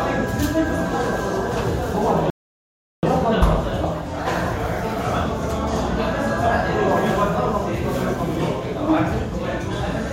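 At 2.30 s the sound drops to silence until 3.03 s, a rebuffering stall: playback exhausted its downloaded audio and paused, adding 0.73 s, then resumed exactly where it stopped. The waveform shows a flat gap, the spectrogram a blank vertical band.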